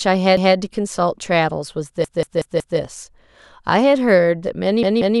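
Repeated buffer at 0.37–0.56 s, 2.04–2.79 s and 4.83–5.2 s: audio arrived late, so the device replayed the same 186 ms chunk one, four and two extra times. Each is a hard-joined stutter, and the chunk length fits an 8192-sample buffer.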